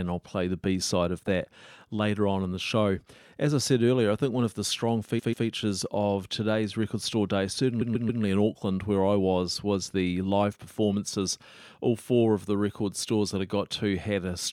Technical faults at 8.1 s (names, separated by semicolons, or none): repeated frames